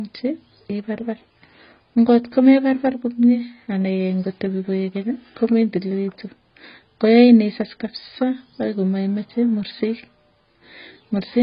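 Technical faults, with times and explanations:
Throughout, AAC compression: speech stops dead at 5.1 kHz, sounding dull and smeared with warbling, fizzy sibilants, likely from heavy AAC-LC coding near 16 kbps.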